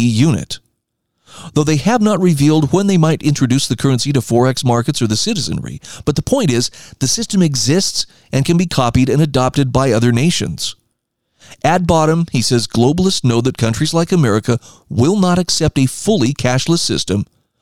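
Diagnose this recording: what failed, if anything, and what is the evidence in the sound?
Nothing in the signal chain shows up as having failed: no stage, from the analogue wiring through to playback, leaves an audible fault on this speech.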